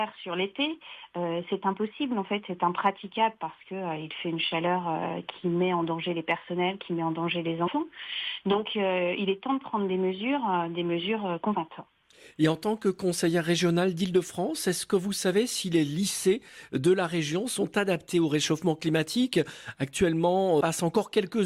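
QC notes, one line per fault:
7.66 to 7.68 s, damaged data in a compressed stream: corrupted bytes made the decoder misread or reject frames and lose sync, briefly disrupting the sound while it searched for the next frame header.
11.54 s, damaged data in a compressed stream: a very short burst of bad data broke decoding momentarily, leaving a brief disturbance until the decoder resynchronised on a valid frame header.
20.60 s, damaged data in a compressed stream: another short corrupted stretch threw the decoder out of sync, producing a momentary glitch before normal frame decoding resumed.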